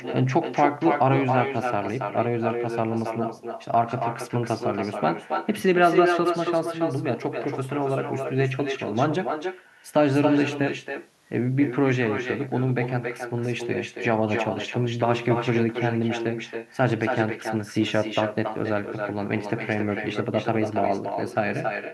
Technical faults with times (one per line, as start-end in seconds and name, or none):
0.00-21.93 echo with no canceller